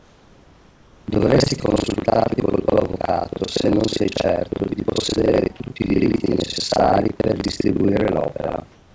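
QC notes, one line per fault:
Throughout: buffer tearing. A steady robotic buzz at 25 Hz rides on the speech and drops away whenever the signal does. The writing and reading sides of the playback ring buffer have slipped and cross inside each period, so roughly half of every buffer replays audio from around 70 ms earlier. The hard joins at both edges of that stale stretch repeat once per buffer, and that repetition is the rattle. The 25 Hz rate fits a 40 ms period.
0.00 to 1.07 s: comfort noise in place of the background. The opening 1.07 s carries a smooth, featureless hiss, about 3 dB quieter than the room background heard later under the speech, which sits about 32 dB below it. The change is likely due to discontinuous transmission: the sender's voice detector heard no speech and stopped sending, and the receiver filled the gap with synthetic noise shaped broadly like the room. The real background's detail returns only once the sound begins.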